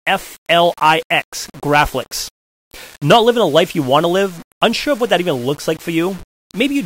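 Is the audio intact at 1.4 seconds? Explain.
No. At 1.4 seconds the speech has the same grainy, gritty distortion that runs through the whole clip, and that points to low bit depth without dither. The sound is likely rounded to about 6 bits with no dither, so the error follows the signal rather than sitting as a steady hiss. It sits roughly 25 dB below the speech, roughening quiet stretches and making the faintest bits sputter or drop out.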